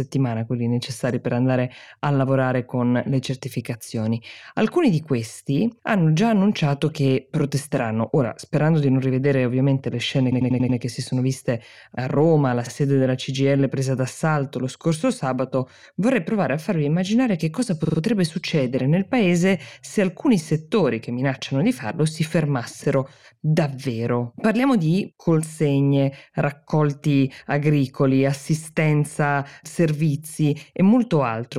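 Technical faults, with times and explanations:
10.31–10.78 s, repeated frames: just after "rivedere ovviamente le scene", a 93 ms slice stutters five extra times before "che si sono viste". That fits a run of four compressed frames being played again, adding about 0.46 s.
12.66–12.70 s, repeated frames: a single 46 ms stutter. That fits two frames repeated once.
17.84–17.97 s, repeated frames: between "farvi immaginare che cosa" and "succedere nel paese se", a 46 ms block stutters three extra times, adding 139 ms.
22.83–22.85 s, repeated frames: after "minacciano di farlo si", one 23 ms frame repeats once.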